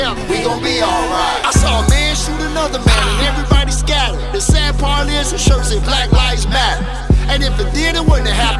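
No dropouts, distortion, pitch or timing irregularities, or other technical faults can be heard in the signal.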